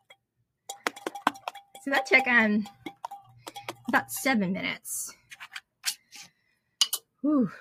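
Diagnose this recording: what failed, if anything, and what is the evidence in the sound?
A speech noise suppressor was left on in the call-processing stage, applied to sound it was never designed for. The level pumps throughout, swinging by about 5 dB. It treats sustained tones and tails as noise and keeps pulling them down, while attacks pass.

Sound cut by the noise suppressor is clearest at 0.01–0.68 s, with a drop of about 21 dB, at 2.73–3.06 s (about 15 dB), 3.22–3.51 s (about 9 dB), 5.15–5.35 s (about 15 dB) and 5.61–6.75 s (about 21 dB). Here, held material sinks and decays are cut short.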